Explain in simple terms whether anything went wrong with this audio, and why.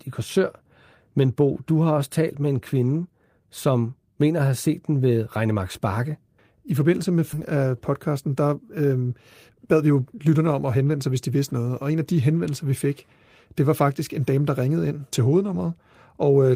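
Yes, two things went wrong. At 7.33 to 7.35 s the speech suddenly jumps forward: after "I forbindelse med" it lands straight on "af podcasten der", with no pause. This is a skip ahead. Roughly seven tenths of a second of audio was thrown away while later audio was already waiting, and the two sides were stitched together.

From 9.49 to 10.9 s, just before "sig hvis de vidste", the talking sounds hurried, about 18% faster, yet the pitch stays normal. This is a jitter buffer speed-up. Too much delayed audio had piled up, so tiny slices totalling about a third of a second were trimmed out to catch up.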